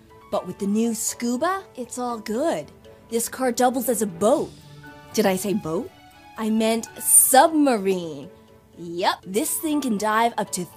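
At 7.21 to 7.25 s a short, loud chirp-like blip cuts through the sound, peaking near -5 dBFS. It is a corrupt frame decoded: flipped bits in a couple of compressed frames were played anyway, so misread gains and codes pushed energy into the wrong frequencies for about 40 ms.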